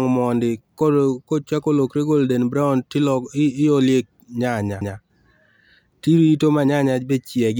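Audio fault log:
4.81 s, CD skip: a quick tick as the player mutes for a few milliseconds, then the speech carries on from a different spot. A knock or a flaw in the disc sent the laser onto another turn of the disc's spiral, so a chunk of audio gets jumped.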